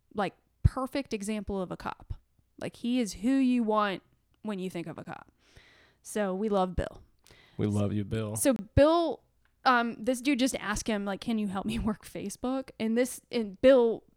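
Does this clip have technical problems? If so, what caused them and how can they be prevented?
Yes, there are two blocks of digital silence in this speech clip. The first, at 5.04 s just after "you think of a", is a 10 ms hole heard as a tick. The second runs from 8.56 to 8.59 s, about 28 ms, and sounds more like a brief dropout. In both, the samples are set to zero with no fade, so the waveform snaps flat to the centre line and back. A spectrogram shows an empty vertical gap bounded by thin broadband streaks at each edge. Blocks of zeros like these come either from the program missing its deadline to fill the output buffer or from a processing step producing invalid numbers that were then replaced. They can be prevented by giving the audio thread larger buffers or higher scheduling priority and by guarding the processing against invalid values.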